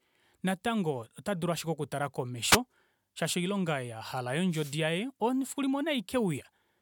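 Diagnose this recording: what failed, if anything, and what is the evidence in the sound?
The analogue radio link from the wireless microphone failed twice. Multipath fades let receiver noise rise into wireless microphone noise hits: a short swish or burst of static at 2.50 to 2.57 s and a longer one at 4.50 to 4.78 s.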